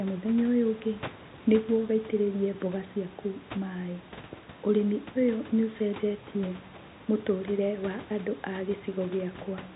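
Speech with no technical faults: the room noise about 22 dB below the voice belongs to the recording, and the band limit at 4 kHz is simply that of G.711 telephone coding.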